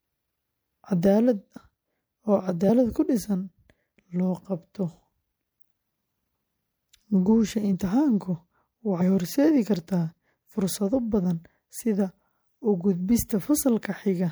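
At 1.56, 2.68, 6.34, 7.72 and 9.00 s, compressed frames are skipped. The speech jumps ahead by whole 26.1 ms frames, losing roughly 50 to 150 ms each time. Each join is a brief smeared blip: the spectrogram shows an abrupt content shift without a sharp vertical click line.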